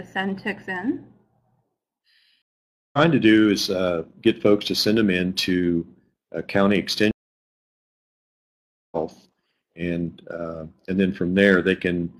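At 2.42 s the audio drops out for about 0.51 s and returns at 2.98 s; at 7.11 s a longer gap of about 1.81 s follows, ending at 8.97 s. Both are stream reconnects: the connection broke, playback stopped, and a new decoder picked up mid-stream. Because a live feed keeps moving during the outage, the sound resumes further along, roughly half a second later after the first gap and around one and a half seconds later after the second.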